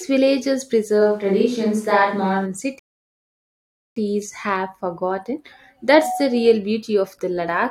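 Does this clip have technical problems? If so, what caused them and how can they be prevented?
Yes. From 1.03 to 2.44 s the recording likely switched from the close microphone to a distant one, probably after the close signal dropped out. The voice abruptly turns roomy and hollow, with thinner bass and faint room noise roughly 35 dB below the speech, though the level stays about the same. Monitoring the close microphone's signal and recording a backup close track prevents this.

From 2.79 to 3.96 s there is a rebuffering stall: the player ran out of downloaded audio and paused until more data arrived. The sound drops to silence and then resumes exactly where it stopped, so nothing is lost but 1.17 s is added. A larger playback buffer or adaptive bitrate streaming prevents this.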